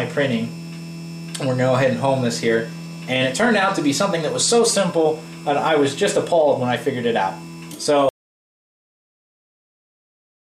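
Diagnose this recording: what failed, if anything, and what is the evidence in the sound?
The input device or link likely failed while recording continued, an audio dropout to silence: from 8.09 s to the end, sound stops dead, leaving no room tone.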